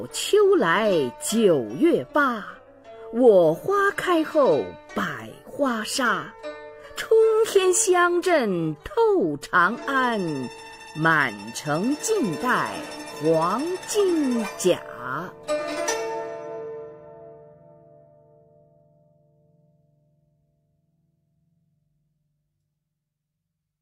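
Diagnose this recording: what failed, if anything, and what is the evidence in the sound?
Nothing in the signal chain has failed: the level, timing and continuity of the recording hold steady throughout, with no interruptions, distortion or wiring, buffer, network or storage problems audible at any point.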